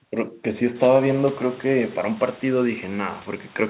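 Speech recording; no technical faults can be heard.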